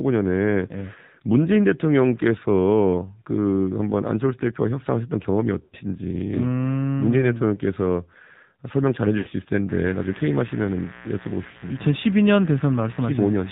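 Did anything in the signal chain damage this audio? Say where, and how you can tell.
Yes. At the codec stage, the whole clip has been through the AMR narrowband mobile codec, and the damage is plainly audible. The speech is band-limited with nothing above 4 kHz, and the voice has the buzzy, synthetic edge of a vocal tract model rebuilt from very few excitation pulses per subframe. That degree of coarseness fits the low 7.4 kbps mode of AMR-NB.

At the network stage, there are lost AMR speech frames at 5.64–5.75 s, 9.18–9.28 s and 11.50–11.65 s. Frames that failed their checksum on the radio link were replaced by the decoder's concealment. It repeats the last good pitch and spectral settings while ramping the gain down, so the sound smears and dips at each point. The first two gaps last about 80 ms, consistent with four consecutive 20 ms frames. The third lasts about 40 ms, pointing to two.

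In the analogue wiring, mains buzz enters at 9.69 s and continues to the end. The raspy, steady tone is built on a 60 Hz fundamental with stacked harmonics, sitting around 20 dB below the speech. That spectrum comes from sharp switching spikes twice per mains cycle, from a dimmer, rectifier or unshielded lead coupling into the line. Because it starts partway through, the interference was introduced mid-recording rather than being present from the start.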